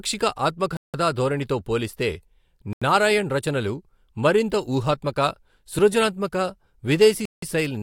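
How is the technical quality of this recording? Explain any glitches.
The speech is interrupted three times by a block of digital silence: from 0.77 to 0.94 s, from 2.73 to 2.82 s, and from 7.25 to 7.42 s. The first and last last about 171 ms, the middle one about 85 ms, which fits whole buffers of 8192 and 4096 samples at 48 kHz going unfilled and being output as zeros. Each drop cuts the signal off abruptly, leaving a clear hole in the sound.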